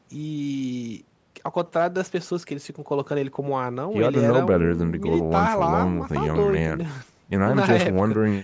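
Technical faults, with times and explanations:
Nothing here counts as a fault; the speech has simply gone through a call's microphone processing, which trims away the deepest bass and leaves nothing above 8 kHz, and that's just how such a path behaves.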